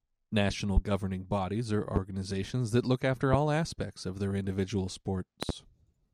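Loud pops hit the speech at 0.77 to 0.80 s, 1.96 to 1.99 s, and 3.33 to 3.37 s, between "that look after" and "aspects of their individual". A double pop follows "aspects of their individual" at 5.43 to 5.52 s. Most peak about 20 dB above the speech, the second about 15 dB. The speech carries on underneath. Each is likely a sudden voltage pulse from a plug, switch, static or driver glitch.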